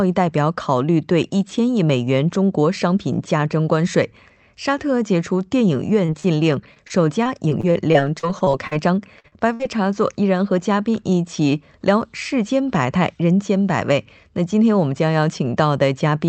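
At 6.05 to 6.10 s and 6.20 to 6.26 s, short concealed packet loss drops about 20 ms and then 40 ms of speech; the receiver extends the preceding sound, leaving brief smears. From 6.74 to 8.74 s, repeated packet loss (robotic sound) opens twelve gaps up to 43 ms each, patching about 15% of the span with continued sound, which turns choppy. Two more short concealed losses of about 40 ms each, at 9.20 to 9.26 s and 9.28 to 9.34 s, blur the audio again. At 9.54 to 9.61 s, a burst of packet loss removes about 60 ms; the held, fading fill gives a buzz or hiss before speech resumes further on.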